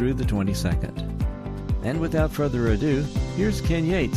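Sharp single clicks sound at 0.46, 1.46 and 2.87 s. Each is likely dropped samples: a fraction of a millisecond vanishes, so the waveform jumps abruptly.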